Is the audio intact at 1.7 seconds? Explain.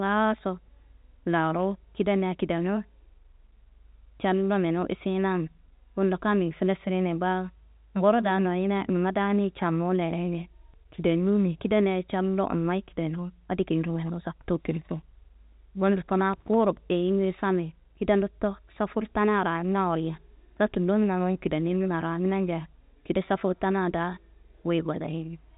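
Yes, the audio is intact at 1.7 seconds, with the speech carried cleanly through G.711 telephone coding, which limits it to the band below about 3.8 kHz.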